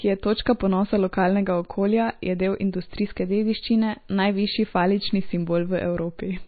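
Speech, and it's been squeezed hard the whole way through: what you're hearing is most likely MP3 compression at a very low bitrate, something like 24 kbps. Nothing gets above about 4.6 kHz, so the top end is just gone and the s sounds go dull and a bit chirpy. Weak frequency detail flickers in and out from frame to frame, which gives that watery, swirly texture, and consonant onsets come out smeared.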